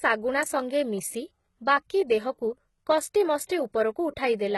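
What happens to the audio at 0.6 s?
At 0.60 s an electrical switching spike, likely a short arc from a nearby switch, motor or static discharge coupling into the audio line, adds a sharp snap on top of the speech, lasting only about a millisecond.

Underneath it, as everywhere in the clip, heavy codec damage points to HE-AAC compression, likely at a low rate around 16 kbps. The treble above the coded band is rebuilt by copying lower bands upward, so s sounds turn gritty and metallic, and nothing reaches above 11.8 kHz.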